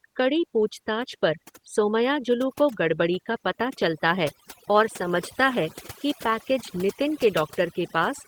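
From the first moment to the end, the speech carries overdone noise removal. A suppressor set far too aggressively has driven individual frequency bands down or off wherever they sat close to its noise estimate, and the softer parts of the speech went along with them. Between phrases the background falls to near silence dotted with twinkling specks. On a spectrogram this appears as a dark floor scattered with isolated bright pixels, and speech harmonics fade out at their weaker edges.

Also throughout, Opus voice compression adds its own damage, and it is plainly audible. The sound points to hybrid coding, with the linear-prediction layer carrying the band below 8 kHz and a transform layer above it, at a rate that fits roughly 16 kbps and a 20 ms frame grid. The excitation is coded coarsely, so the speech sounds hoarse and faintly robotic. A spectrogram would show blocky, smeared texture above 8 kHz changing in 20 ms steps, with nothing above about 20.1 kHz.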